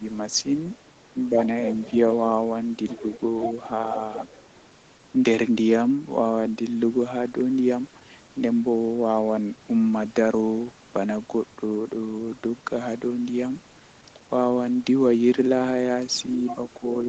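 Between 1.14 and 1.36 s, the speech dips briefly in level, by a few decibels at most. The dips add up to well under a tenth of a second. The likely cause is speech suppressed in double talk, with the echo canceller mistaking overlapping speech for loudspeaker echo.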